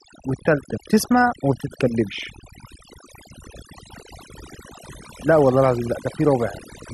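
Speech with overdone noise removal throughout: aggressive denoising gates bands near the noise estimate, leaving near-silent, twinkling gaps and taking quiet parts of the voice with them.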